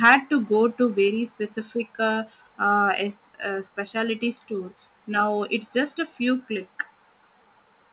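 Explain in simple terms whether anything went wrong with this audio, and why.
Right at the start, from 0.04 to 0.15 s, the speech has a harsh, crackly edge. That is likely microphone overload: the loudest moments were too strong for the input, so their tops were sliced off. That is why it sounds distorted rather than just quieter.

The level then drops suddenly at 0.08, 1.08 and 3.12 s, likely because the call software turned the microphone volume down in steps. Unlike overload, each drop makes the sound quieter without adding distortion of its own. The speech and background fall together, as heard through a phone-quality call line that carries nothing above 4 kHz.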